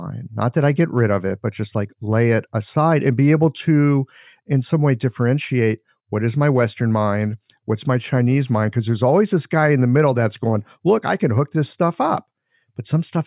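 Nothing technical stands out in this speech recording; it's a straightforward, untroubled listen.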